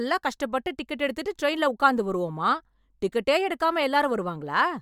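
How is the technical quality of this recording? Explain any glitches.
No glitches or technical faults can be heard anywhere in the recording.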